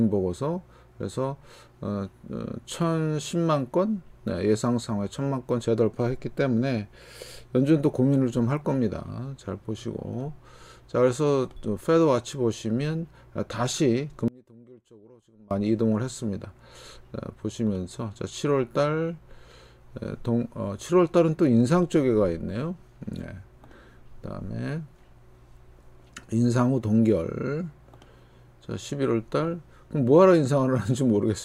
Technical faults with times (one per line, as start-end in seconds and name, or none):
14.28-15.51 one channel inverted